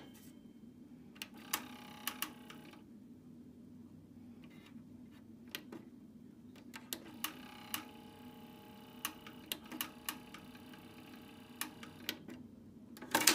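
Nothing here trips a fault, and the whole clip runs through without a single glitch worth pointing to.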